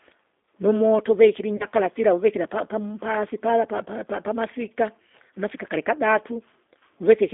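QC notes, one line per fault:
Throughout: G.729 codec, plainly audible roughness and slightly synthetic timbre from low-rate pulse-based reconstruction, consistent with 8 kbit/s; spectrogram shows energy confined to roughly 250 Hz–3.6 kHz, with empty bands above.
1.57–1.66 s: VoIP packet loss concealed by the speech codec. About 30 ms of audio, fitting one lost packet, is replaced by a decoder extrapolation that turns into a fading buzzy tone or coloured noise and stays weak or distorted afterwards. On a spectrogram the harmonics run flat and smeared, and the waveform envelope decays.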